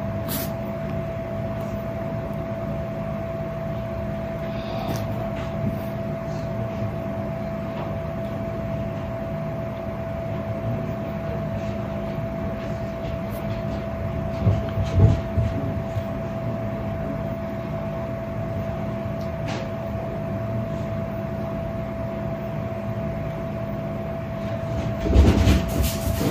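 Nothing goes wrong anywhere in this audio, so there's no moment to point to and nothing to explain.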